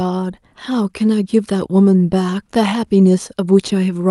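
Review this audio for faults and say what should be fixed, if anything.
Clock drift between sender and receiver runs through the whole clip. The sender's clock is about 1.5 percent slower than the receiver's, so the jitter buffer keeps running low. To keep playing, the receiver has to stretch the audio rather than let the buffer empty. The result is a faint, uneven unsteadiness in the timing of the speech, under the Opus coding, which is band-limited to 12 kHz. Preventing it means adding drift compensation that estimates the sender-receiver clock ratio and resamples smoothly, so the buffer never drifts toward empty.

Repeated timing corrections occur from 0.70 to 3.98 s. Across this span the receiver repeats short pieces to make up for the slow sender, adding about 50 ms in total and playing the stretch at roughly 98 percent speed. The edits all lengthen the audio but fall at irregular points, so they come across as small hiccups and a slightly dragging, uneven tempo rather than one obvious glitch. 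Preventing them means replacing discrete repeat-based corrections with continuous, pitch-preserving time-scaling in the jitter buffer.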